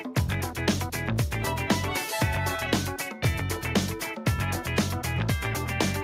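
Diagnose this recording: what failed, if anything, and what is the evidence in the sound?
Nothing in the signal chain shows a failure: no stage, from analogue wiring through conversion, buffering, network or playback, leaves an audible mark at any point in the recording.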